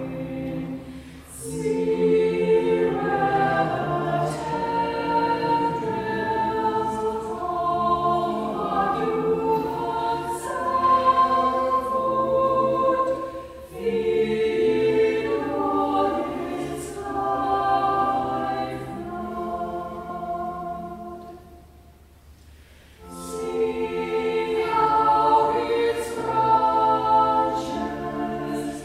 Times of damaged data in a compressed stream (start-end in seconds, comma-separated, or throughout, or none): none